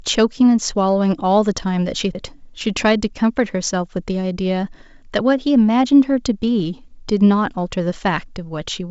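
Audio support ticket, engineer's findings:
CD skip at 2.13 s. About 15 ms of muting with a tick, then playback resumes from a different point. Laser jumped to another turn of the disc spiral. Sound jumps by whole disc turns. Check transport shock handling and disc surface.

Bit errors on an ADPCM link at 6.60 s. Short pop and rough burst with brief level change. Roughly 0.15 % of bits flipped across a few frames. Each error throws off the decoder's step size and predictor, so the damage rings on briefly. G.722 link at 64 kbit/s shows faint or no coding damage.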